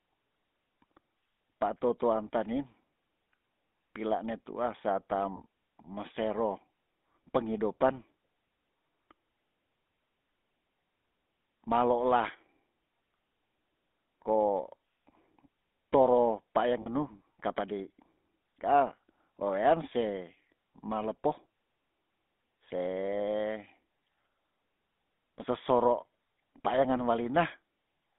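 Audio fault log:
Throughout, GSM full-rate codec: a buzzy, gravelly roughness is plainly audible in the speech, and the line runs only from about 200 Hz to 3.6 kHz. The pulse-driven vocal-tract model puts the grain inside the voice itself, unlike plain band-limiting. This fits 13 kbps full-rate coding.
5.36 to 5.41 s and 16.82 to 16.88 s, lost GSM frames: each break lasts about 40 ms, which fits two 20 ms frames. The last good frame's settings are repeated, so instead of a silent gap or click there is a brief rough, metallic ring that ends before it can fade to silence.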